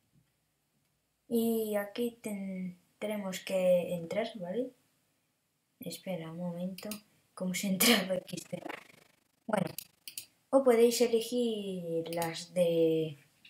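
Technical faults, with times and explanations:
8.16–10.06 s, overlap-add ripple: the audio was split into windowed frames and rebuilt with an overlap whose window gains fail to sum to a constant, so each frame boundary leaves a deep trough in level. Swinging by about 60 dB around 30 times a second, the level nearly vanishes at every seam and then returns, turning the sound into a harsh, buzzing flutter, a robotic tremolo chopping it at the frame rate for nearly two seconds.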